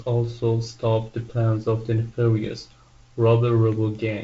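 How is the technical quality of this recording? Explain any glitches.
No glitches can be heard.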